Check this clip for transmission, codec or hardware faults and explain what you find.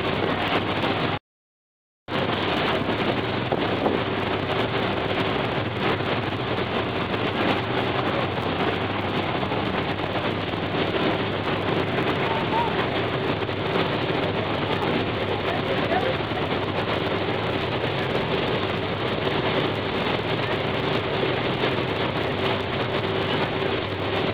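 One fault runs through the whole clip: a block size mismatch (truncated). One stage produces blocks slightly longer than the next stage accepts, so each block's tail is dropped. That leaves a buzz at 92 Hz, the block rate, while speed stays essentially unchanged. A spectrogram shows vertical seams every 10.9 ms, and the waveform shows steps at each seam.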